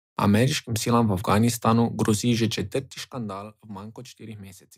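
Speech clip where, right after "grozi že", a fine ticking zipper noise rides on the audio from 2.52 to 3.48 s as the level falls by roughly 20 dB, applied in unsmoothed steps around fifty times a second.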